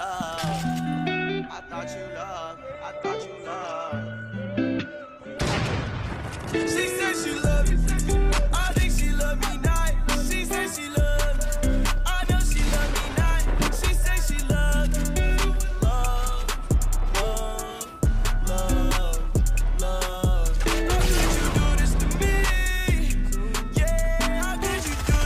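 From 2.71 s to 8.71 s the stream falls back to a lower-bitrate version, the adaptive stream at a lower bitrate, and the sound fits a switch from roughly 64 kbit/s Opus down to 16 kbit/s. The change is abrupt in both directions, with no gap. Throughout those six seconds nothing is left above 12.2 kHz, so the top end turns dull and thin, and the coarser coding adds more codec artefacts.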